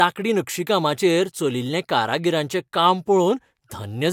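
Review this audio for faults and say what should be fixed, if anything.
Nothing needs fixing: the speech signal comes through intact, with no audible technical faults anywhere in the recording.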